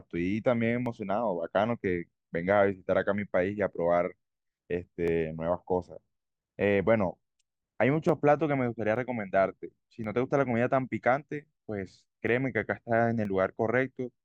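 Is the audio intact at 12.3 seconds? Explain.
No. Dropped samples at 12.28 s give a single sharp click, likely because under a millisecond of samples is missing and the waveform jumps abruptly.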